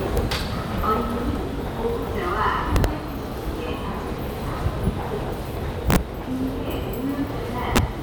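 Integer overflow strikes this recording of sounds at 0.17 s, 2.76–2.84 s, 5.90–5.96 s and 7.76–7.78 s. Loud peaks exceed the integer range, overshooting by up to about 8 dB, and wrap to the opposite sign instead of limiting, producing violent cracks far harsher than clipping.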